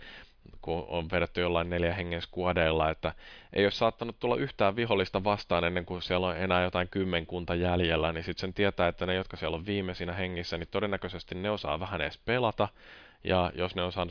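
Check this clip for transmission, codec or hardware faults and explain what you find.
No faults can be heard anywhere in this speech.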